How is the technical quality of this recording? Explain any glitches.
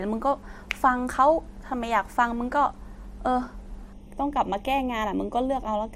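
From 3.93 s to the end, the speech turns hollow and phasey, with a thin, notched quality. This is channel delay (comb filtering): one channel runs about a third of a millisecond late, and summing to mono cancels evenly spaced frequencies, the first near 1.5 kHz.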